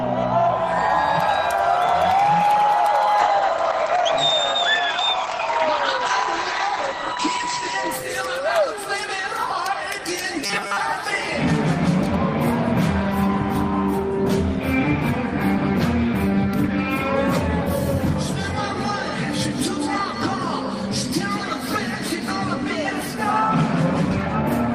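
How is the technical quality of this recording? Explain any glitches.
Two faults stand out, both in the first half of the recording.

From 3.2 s to 8.73 s there is a call bitrate drop. The encoder's rate falls from 32 kbps to 11 kbps and stays at its lowest for about 4.2 s. At that rate the coder quantises coarsely and narrows the bandwidth from 20 kHz to 8 kHz. The sound turns muffled and watery, losing its top end until the bitrate recovers.

From 10.43 s to 10.80 s the sound becomes a rigid, metallic buzz pitched at 200 Hz. That pitch fits a 5 ms buffer being replayed, with most of the real audio in that stretch skipped. The likely cause is robotic sound from repeated short buffers: packets arriving too seldom, with playback filling the gaps by looping the last short block.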